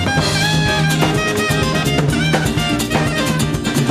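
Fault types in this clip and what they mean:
No technical faults can be heard anywhere in this audio. Nothing in it calls for a fault line.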